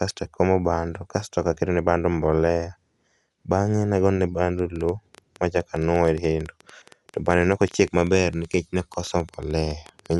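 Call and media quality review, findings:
Dolby Digital compression, full clip, likely from a low-bitrate AC-3 encode, fits 64 kbps. Encoder narrows band, nothing above 11.5 kHz; unfunded frequency lines refilled with dither noise. Speech dull, rough fluttering noise, plainly audible codec damage.

Train of clicks, 4.59–10.14 s, starting just after "nagone bando". Likely interference or struggling interface injecting repeated pulses. About 9.2 per second, irregular spacing, around fifty clicks, peaks about 5 dB above signal. Ticking over speech and pauses.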